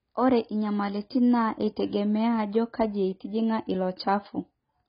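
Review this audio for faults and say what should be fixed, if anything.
Heavy AAC compression damage runs through the whole speech clip: nothing sits above 5.4 kHz, so the sound is dull, and sibilants come out smeared and fizzy with a warbling texture. The likely cause is a low-bitrate AAC-LC encode, consistent with roughly 16 kbps, where the encoder drops the top band and quantises the rest coarsely. To prevent it, encode speech at a higher bitrate or keep a lossless master for delivery.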